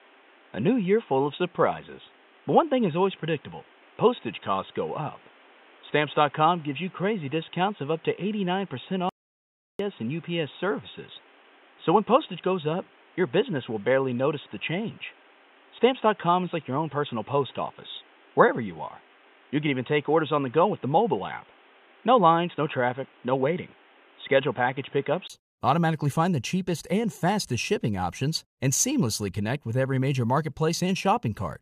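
From the start until 25.30 s the speech is band-limited with nothing above 3.8 kHz, likely from an input switched to a poorer device, with a flat spectrogram ceiling and a brief 20 ms gap at 25.30 s before fuller sound returns.

At 9.09 s an audio dropout to silence cuts the speech for 0.70 s until 9.79 s, likely a lost input, showing as a flat, silent waveform and an empty spectrogram column.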